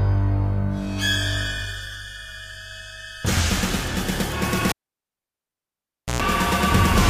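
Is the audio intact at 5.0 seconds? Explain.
No. From 4.69 to 6.22 s a cable is pulled and plugged in: a pop, about 1.48 s of near silence, then a 60 Hz mains buzz and a second pop, unlike a plain dropout.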